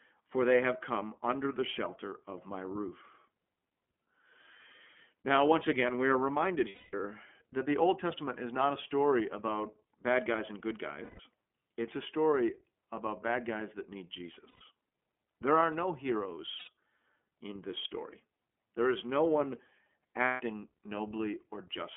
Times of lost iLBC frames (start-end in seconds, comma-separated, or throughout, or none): 6.68-6.94, 11.04-11.20, 14.49-14.62, 16.58-16.69, 20.25-20.41